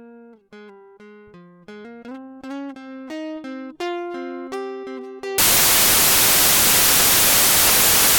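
Samples built from the wrong bytes hit this music clip from 5.38 s to the end: misassembled bytes promote the low bits, turning the music into loud, harsh broadband noise.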